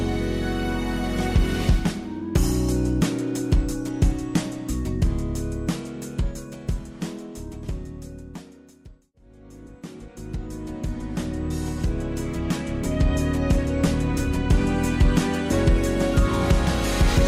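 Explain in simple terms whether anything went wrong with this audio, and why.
Nothing went wrong with this audio, because no fault of any kind can be heard anywhere in it. There is simply nothing here that needs fixing or explaining.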